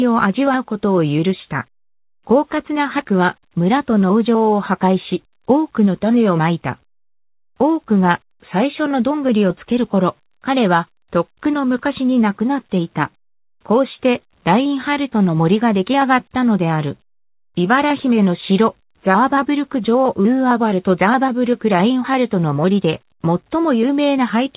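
There are no technical faults to describe in time order; the sound comes through a call path whose G.711 A-law coding at 64 kbps leaves nothing above 4 kHz.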